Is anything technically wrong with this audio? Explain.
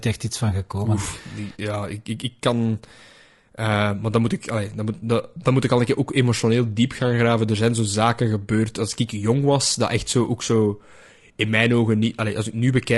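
Yes. Throughout the speech, the voice sounds rough and grainy, with a hiss filling the gaps between pitch harmonics and a thin, somewhat synthetic top band. The likely cause is low-delay AAC compression such as AAC-ELD. Its very short frames resolve harmonics poorly, so at a rate that fits roughly 32 kbps the spare bits run out. Unlike a plain low-pass or narrowband limit, the highs are still present but sound artificial, and the grain sits inside the voice rather than being a steady background noise.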